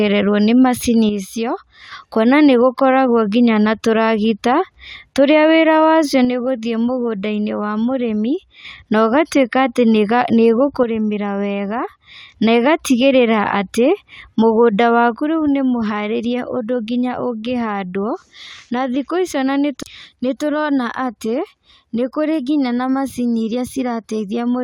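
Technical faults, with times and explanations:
1.09–1.92 s, 6.25–8.65 s, 10.83–12.33 s and 15.14 s to the end, one channel drops out: the speech falls abruptly by about 6 dB and stays level, likely because one stereo side vanished before the mono sum. A volume fade would ramp instead of stepping.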